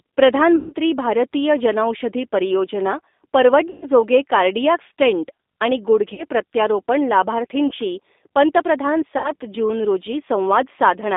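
G.729 coding runs through this whole speech clip. The 8 kbit/s codec rebuilds the voice from a vocal tract filter, a pitch predictor and a few pulses per frame, so it sounds plainly rough and slightly synthetic, and is held to a telephone band of about 250 Hz to 3.6 kHz. VoIP packet loss concealed by the speech codec breaks the audio at five points, covering about 140, 120, 40, 40 and 60 ms of lost audio in turn. These fall at 0.56 to 0.73 s, just before "भारतीय जनौषधी परियोजना"; at 3.70 to 3.88 s, before "कार्डिॲक स्टेंट आणि"; at 6.14 to 6.24 s, right after "कार्डिॲक स्टेंट आणि"; at 7.67 to 7.74 s; and at 9.18 to 9.33 s. In each gap the decoder stretches its last pitch and filter into a buzzy tone or coloured noise that fades. Because every frame builds on the one before, the voice stays weak or distorted for a short while after the audio returns.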